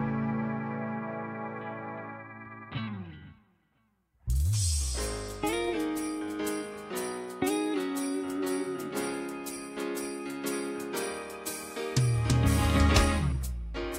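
No technical faults can be heard anywhere in the recording, and the signal stays intact and steady throughout.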